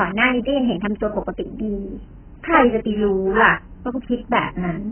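Speech, all of it dull and warbly from heavy AAC compression, which fits a low bitrate near 10 kbps. The spectrogram shows nothing above 3.1 kHz.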